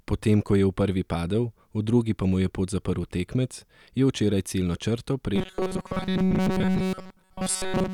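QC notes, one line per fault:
5.36 to 7.94 s: robotic sound from repeated short buffers. The speech becomes a rigid metallic buzz at 188 Hz that only loosely tracks the words. New audio is likely arriving too slowly. A chunk of about 5 ms keeps looping over most of this stretch.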